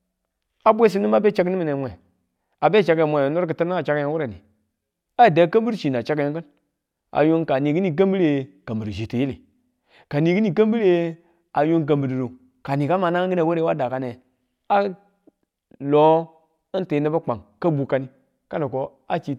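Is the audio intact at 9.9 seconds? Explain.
Yes, at 9.9 seconds the speech plays through cleanly, with no dropout, click, distortion or other fault.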